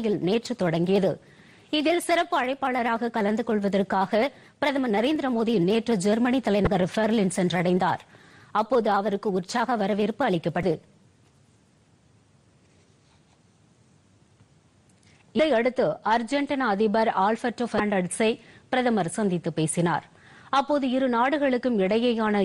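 Damaged data in a compressed stream at 6.64–6.67, 10.61–10.64, 15.36–15.40 and 17.77–17.80 s: corrupted bytes make the decoder misread those frames and lose sync until it finds the next header, leaving each as a brief chirp or squawk of about 30 ms.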